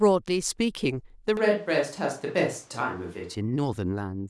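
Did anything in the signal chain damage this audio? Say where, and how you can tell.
Yes. Between 1.37 s and 3.35 s the speech abruptly turns roomy and hollow, with thinner bass and room noise around 30 dB down, though level barely changes. A spectrogram shows weakened lows and smeared reverberant tails with sharp edges, likely a switch to a distant microphone at capture.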